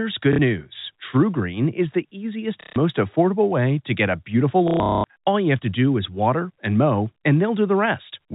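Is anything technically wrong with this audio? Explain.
Yes. Packet loss with last packet repeated occurs at 0.33 to 0.39 s, at 2.61 to 2.76 s after "is the easiest", and at 4.68 to 5.16 s after "to get a beautiful". Lost packets were replaced by replaying the previous one. The result is a robotic stutter that fits 30 ms packets.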